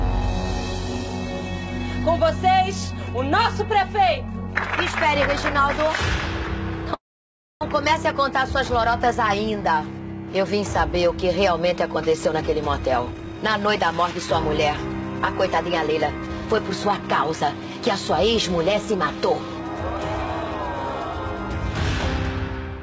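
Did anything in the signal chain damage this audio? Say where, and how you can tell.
Yes. A call audio freeze at 6.94 to 7.63 s sits in the network and jitter buffer stage. The last sound is stretched into a brief fading buzz or hiss, then about 0.62 s of silence, and the audio resumes exactly where it stopped. Nothing is lost; a 0.67 s gap is inserted. The likely cause is packets held up in transit, emptying the buffer.

The jitter buffer speed-up comes from the same buffer. The audio runs faster at unchanged pitch at 13.12 to 14.27 s (130%, trimming roughly 0.4 s), then more gently at 15.47 to 16.47 s (107%), 16.91 to 18.25 s (109%) and 18.73 to 20.62 s (104%). Repeated removal of pitch-period slices drains the backlog and sounds hurried in the stretches above about 105%.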